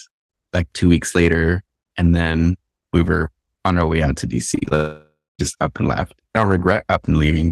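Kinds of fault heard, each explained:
Repeated packet loss (robotic sound): from 4.51 to 4.73 s, five short gaps, the longest about 23 ms, are each patched by stretching the preceding sound, so nearly half that span is synthetic. It sounds choppy; a spectrogram shows smeared, repeated frames, and the waveform shows small seams between them.
Long network dropout: from 4.75 to 5.41 s, roughly 0.64 s of sound is missing, likely from a network outage. The receiver first extends the last sound as a fading buzz, then leaves about 0.23 s of silence. On a waveform this shows as decaying filler followed by a flat gap, and on a spectrogram as blurred bands fading into an empty stretch.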